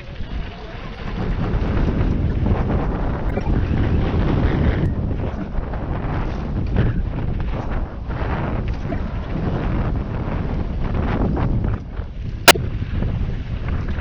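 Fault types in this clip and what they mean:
Doubled audio track: from about 1.0 to 4.86 s a second full-band copy runs roughly 200 ms behind at about the same level, dry and switching in and out abruptly, likely from the same audio being picked up again by a slower path.
Corrupt frame decoded: damaged compressed frames got played anyway, so energy lands at wrong frequencies as short chirps and noise bursts, at 2.29, 3.30 to 3.48, 8.89 to 8.98 and 12.46 to 12.57 s, the loudest peaking around -5 dBFS.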